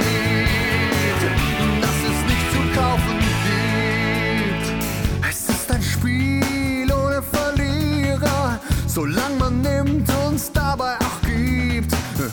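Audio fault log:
No faults detected anywhere in the clip.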